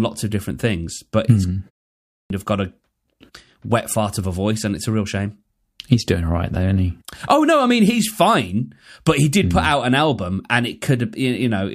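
A speech clip where, at 1.93 s, after a short pause of about 0.31 s, the sound comes back with its start chopped off. That's a clipped start after a pause: the output dozed off in the gap and needed about 370 ms to wake, swallowing everything until 2.30 s.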